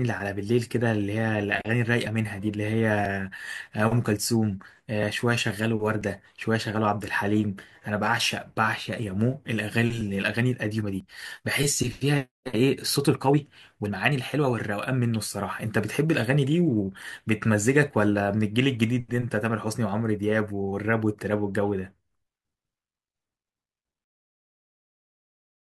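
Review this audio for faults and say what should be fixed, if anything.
The speech has tiny skips from overlap between stream segments at 2.07, 3.06, 4.04, 5.03, 6.01–6.03, 9.03, 10.01 and 11.00 s. Roughly every second, overlapping timestamps make the player trim real audio, so about 5 to 20 ms disappears and the waveform jumps. To prevent it, have the packager write segment timestamps that line up exactly, so neighbouring 1 s segments never overlap.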